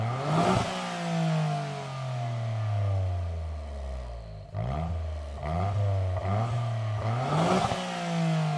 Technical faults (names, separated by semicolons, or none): none